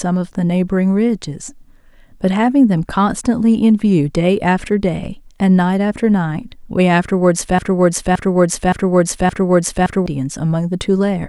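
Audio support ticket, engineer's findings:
Broken-record loop in the speech, 7.59 s to 10.06 s. A 0.57 s fragment repeats exactly, back to back, four times. Likely cause: player or stream stalled, re-sending its last held buffer. Audio due in that span is lost.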